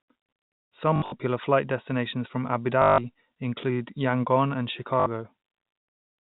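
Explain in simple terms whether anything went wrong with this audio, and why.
Three short stutters come from packet loss with last packet repeated: around 0.96 to 1.12 s (broken up in patches), 2.82 to 2.98 s, and 5.00 to 5.06 s. Pieces of the speech went missing in transit, and the receiver filled each gap by replaying the last piece it had. The replayed pieces don't join up smoothly, and the longer runs buzz robotically at about 50 Hz, which fits 20 ms packets.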